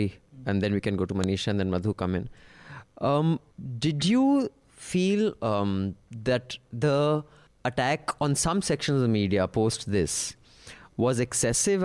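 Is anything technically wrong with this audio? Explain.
Yes. At 1.24 s, between "we can go to" and "and then", there is a single sharp, loud snap that cuts across the speech. This is a file header played as audio: a second WAV piece was joined on without its header being stripped, so those few dozen bytes of metadata were read as sample values. Unlike a buffer dropout click, it lands exactly at the splice between pieces.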